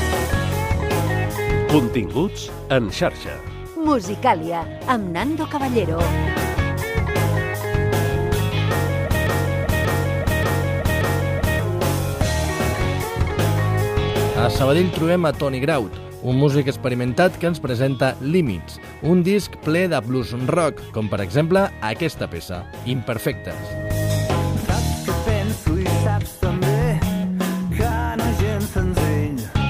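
A broken-record loop runs from 9.27 to 11.59 s. A 0.58 s fragment plays four times back to back, identical on every pass. The player or stream likely stalled and kept resending the last piece it held, so the audio meant for that stretch never plays.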